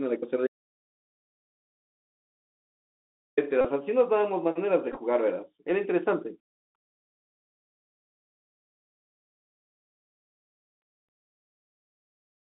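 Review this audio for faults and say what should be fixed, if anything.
The speech was carried over a Bluetooth headset link using the CVSD codec, which at 64 kbps encodes each sample as a single up-or-down bit with an adapting step size. The line passes only about 200 Hz to 3.7 kHz, so everything above is gone and the sound is narrow and boxy. Loud, bright sounds outrun the step size and distort, s sounds turn scratchy, and a granular hiss sits under the speech throughout. To prevent it, record from a wired or wideband microphone instead of a headset hands-free profile.

From 0.47 to 3.37 s there is an audio dropout to silence lasting about 2.9 s. The input feed was most likely lost through a broken link, a disconnected device or a mute, and the recorder kept writing silence. The speech cuts off mid-flow and then resumes abruptly. The gap is silent with no room tone, and whatever was said during it is gone. 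To prevent it, secure the connection and monitor input levels during recording.

Bluetooth headset packet repeats occur at 3.61 to 3.65 s and again at 4.92 to 4.97 s. When voice packets failed to arrive, the chip decoded the previous packet's bits again. In the first event, about 34 ms is replaced, which fits roughly nine lost packets. Because the same packet repeats every 3.75 ms, it produces a short buzz near 267 Hz. The second event covers about 30 ms scattered over 45 ms, with the longest run about 10 ms. To prevent it, keep the headset close to the phone and away from 2.4 GHz interference.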